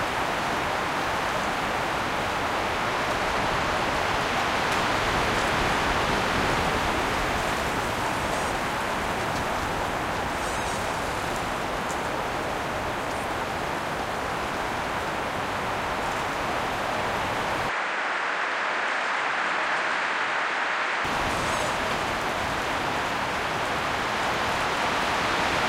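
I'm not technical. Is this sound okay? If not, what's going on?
No. From 17.69 to 21.05 s the sound turns duller, losing its highest sounds above 9.3 kHz, and a low new background noise appears, with no gap and no jump in loudness. The likely cause is an input switched to a poorer device, before it switches back.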